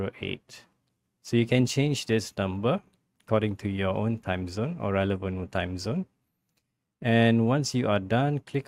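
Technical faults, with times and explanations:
Nothing stood out on listening to this clip.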